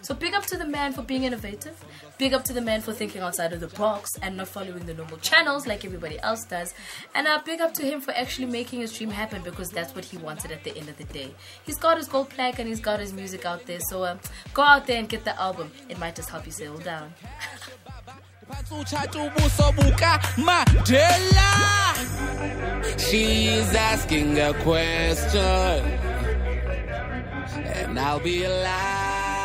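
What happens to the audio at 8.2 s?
Nothing goes wrong at 8.2 s; the audio runs through that moment intact, with no dropout, click or other disturbance.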